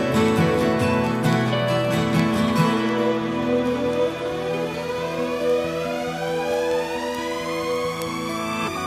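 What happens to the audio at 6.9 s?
At 6.9 s the audio is inside a run of word clock ticks lasting from 0.11 s to 8.80 s. The receiving device's clock is not locked to the sender's, slipping by around 200 ppm. Each slip drops or repeats a single sample, producing a sharp tick roughly every tenth of a second.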